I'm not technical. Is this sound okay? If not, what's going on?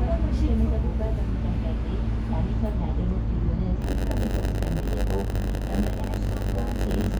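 No. From 3.81 s to the end there is a block size mismatch (padded): each chunk of audio arrives short and is topped up with silence. Those tiny gaps make a 92 Hz buzz, and the sound plays about 8% slower.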